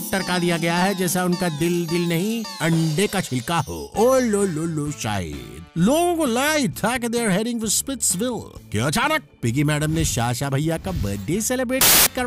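From 11.81 to 12.07 s, file tags played as audio: embedded cover-picture data decoded as samples, giving hard-edged, very loud white noise rather than a codec's quieter glitch.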